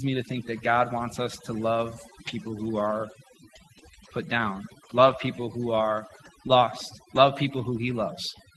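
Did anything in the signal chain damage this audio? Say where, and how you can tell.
Yes. At the call processing stage, overdone noise removal runs through the whole clip. The background drops and breaks up into twinkling specks. The suppressor cut frequency bands near its noise estimate and took quiet speech detail with them.

At the network stage, a lost packet was rebuilt from error correction between 4.97 and 5.11 s, after "put down" and before "people who are lost". There is no gap, but about 80 ms turns rougher and noisier. Several packets were lost there. The decoder played the low-bitrate Opus copies carried in the packets that followed.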